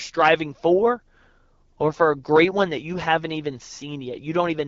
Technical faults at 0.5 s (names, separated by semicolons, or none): AMR wideband (HD Voice) codec